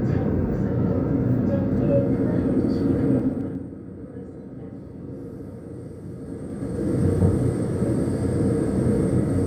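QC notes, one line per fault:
3.16–3.68 s and 6.20–7.08 s: zipper noise. A level drop of roughly 15 dB, then a similar rise, applied in unsmoothed 2 dB jumps, about fifteen per second in the first and seven in the second. Each jump clicks, so ticking rides on the sound.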